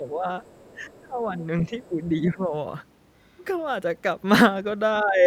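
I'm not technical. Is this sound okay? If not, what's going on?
No. Two problems show up, and both point to trouble cancelling echo on a call.

The talker's voice dips at 0.0–0.28 s, 0.75–1.36 s, 1.62–2.54 s and 5.02–5.26 s. This is speech suppressed in double talk, likely because the echo canceller turned this voice down while the other person was talking. The voice fades rather than dropping to clean silence.

A faint second voice sits underneath at 0.44–0.98 s and again at 1.83–1.88 s. This is the other side's voice leaking through, likely from the talker's own loudspeaker sound that was not fully removed. Here an extra voice is added, while in the first problem the main voice is lost.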